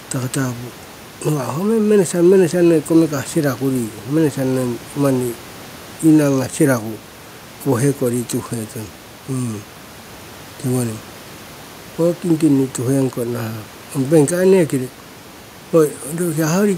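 Nothing stood out on listening to this speech, with only a faint room noise sitting about 25 dB below the talker.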